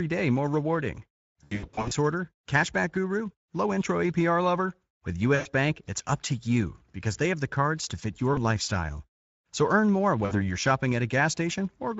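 Throughout, the speech sounds hoarse and grainy, with a thin, noise-like top end. This is the Speex codec, and the plainly audible damage fits a middle setting of around 17 kbps.

From 1.43 to 1.93 s, after "day more rewarding" and before "order cashback guru low", the sound repeatedly smears into stretched, fading fragments. This is VoIP packet loss concealed by the speech codec. The gaps are scattered over about half a second, with the longest near 80 ms. The decoder extrapolates each one from the last pitch and filter.

Similar brief concealed gaps recur at 5.35 to 5.47 s, at 8.33 to 8.59 s after "the cards to fit", and at 10.25 to 10.57 s after "earn more". Each time, the weakness lingers briefly after the audio resumes.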